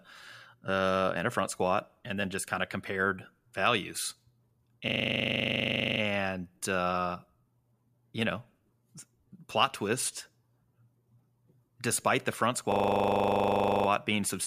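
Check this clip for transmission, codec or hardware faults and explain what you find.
The speech carries two instances of one hardware fault. System hang loop, 4.88 to 6.0 s and 12.72 to 13.88 s: the driver stalled while the output hardware kept replaying a 40 ms ring buffer, so one fragment repeats about 28 to 29 times at 25 Hz, a rapid mechanical stutter bordering on buzz. Little or no audio appears lost.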